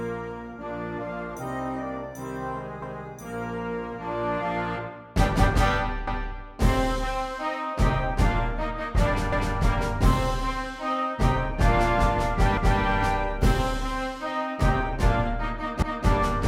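At 2.82, 6.07, 9.32, 12.57 and 15.82 s a quarter-second of sound plays twice, the mark of overlapping chunks. The audio was cut into 3-second blocks, and each block began 250 ms before the previous one ended, so the seam repeats that stretch. It comes across as a regular stutter or click every 3.25 s. Unlike an echo, the repeat is at full level and not blended, and unlike a dropout, nothing is missing.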